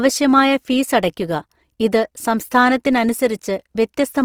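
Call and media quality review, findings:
Grainy, rough texture across the whole clip, with a noisy fizz in the upper band rather than swirling or holes. Full audio bandwidth retained. Likely Opus compression in its CELT music mode, with a bit budget that fits roughly 24 kbps. Starved bands refilled from folded lower-band content or noise, so the damage is plainly audible.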